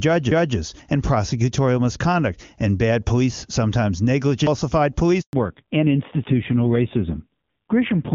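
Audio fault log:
4.47 s, CD skip: there's a tiny tick where the player mutes for just a few milliseconds, then picks up from a different spot. The laser has jumped to another turn of the disc's spiral, probably from a knock or a flaw on the surface, so the sound lurches forward or back by one or more revolutions instead of carrying on smoothly.
5.21 to 5.33 s, handover gap: the speech fades out over a few tens of milliseconds and then goes silent for about 120 ms. That's the call being passed from one network to another. No speech frames make it across during the switch, so whatever was said in that window is simply gone, and the audio only resumes once the new link is up and delivering frames again.
5.33 s to the end, fallback to narrowband: right after the handover, the top end disappears. Up to this point the HD Voice wideband stream sounds clean and open, but here the call drops to an older narrowband codec. 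Nothing above 4 kHz survives from this point on, so the speech goes dull and boxy. It also turns rougher and grainy, which points to a low narrowband rate, something like 5.9 kbit/s.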